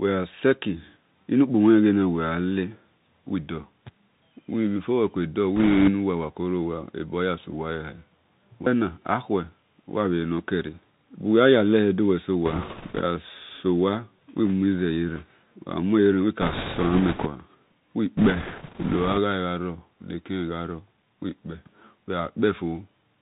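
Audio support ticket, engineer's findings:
Bluetooth CVSD headset codec, whole clip. Band stops near 4 kHz, s sounds scratchy, granular hiss under the speech, loud high-frequency content distorting. Headset link, consistent with 64 kbps CVSD. One-bit delta coding whose adaptive step can't follow fast, loud changes.

Bit errors on a Bluetooth voice link at 5.56–5.90 s, 12.46–13.00 s, 16.41–17.28 s and 18.17–19.18 s. Rushing, crackly noise over the speech, no sharp clicks. Radio link, error rate around a few percent. Each flipped bit nudges the step slightly and its effect decays.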